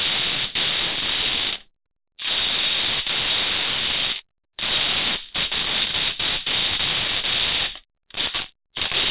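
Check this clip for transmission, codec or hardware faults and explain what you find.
No transmission, codec or hardware faults turn up in this clip; the sound simply carries nothing above 4 kHz, as expected from a G.711 A-law call path.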